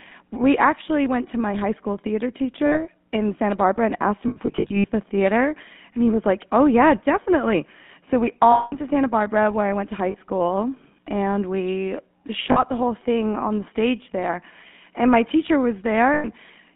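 Throughout, the speech has a buzzy, gravelly roughness and sits in a narrow band from about 150 Hz to 3.5 kHz. That sound fits the GSM full-rate codec at 13 kbps. It models the vocal tract and drives it with a sparse, regularly spaced pulse excitation, so fine detail is replaced by grainy buzz and everything above the line band is gone.

Lost GSM frames break through as short rough, metallic rings where the sound is held rather than continuing. The first comes at 2.66 to 2.82 s, a 60 ms hold. At 4.28 to 4.87 s there is a stuttering cluster of dropouts spread over about 560 ms, totalling 280 ms, with no single gap much longer than about 70 ms. A 200 ms ring follows at 8.52 to 8.75 s. Brief 40 ms holds fall at 10.10 s between "I went to high" and "school and we", and at 12.52 s between "high school and we" and "the whole thing on". A final 100 ms ring at 16.14 to 16.27 s comes just after "my teacher". 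Each time, the decoder repeats the last good frame's settings, which produces that ringing smear.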